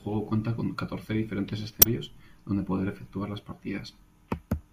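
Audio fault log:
1.79–1.86 s, damaged data in a compressed stream: a brief glitch cuts into the speech as the decoder misreads corrupted frames, loses sync, then locks onto the next valid frame.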